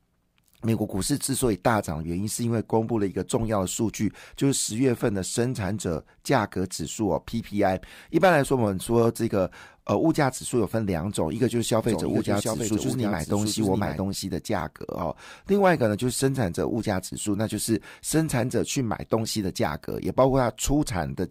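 From 11.84 to 14.0 s the speech is heard twice: a doubled audio track, with a full-band copy trailing by about 0.7 s at roughly 5 dB below the original. It carries no room colour and cuts in and out abruptly, likely from a second capture path.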